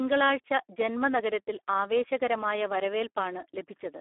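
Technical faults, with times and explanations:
Throughout, Speex codec: the speech passed through a CELP coder at a rate that fits about 8 kbps, leaving too few bits for the excitation. It sounds hoarse and noisy, squeezed into a 300 Hz to 3.4 kHz telephone band with nothing above 3.8 kHz.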